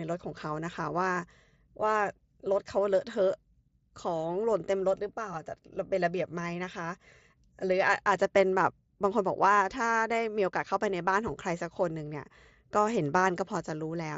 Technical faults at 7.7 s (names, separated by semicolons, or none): none